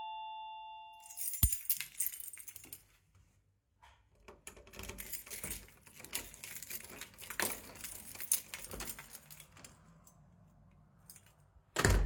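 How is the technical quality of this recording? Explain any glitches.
No glitches can be heard in this recording. The sound runs without any interruption, dropout or added noise that would point to a technical fault.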